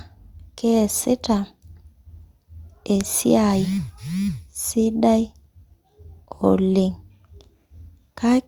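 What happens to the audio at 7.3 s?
Nothing goes wrong at 7.3 s; the speech continues intact through that moment with no dropout, click or other fault.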